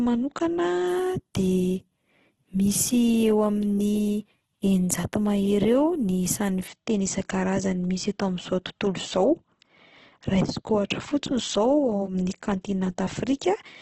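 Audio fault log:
Throughout, Opus compression: the speech sounds heavily rough and grainy, with a hissy, noise-filled texture in the upper bands and nothing above about 12.1 kHz. The likely cause is Opus in its music (CELT) mode at a very low rate, perhaps around 12 kbps. Starved bands are filled with folded or noise content rather than left empty. That sets it apart from MP3, whose dropped bands leave holes that swirl and warble. Here the spectrum stays filled but coarse.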